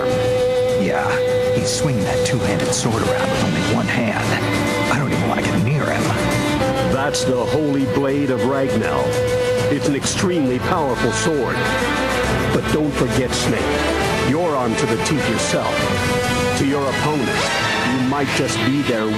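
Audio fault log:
No faults were heard in this clip. There is nothing in the audio to enter in the log.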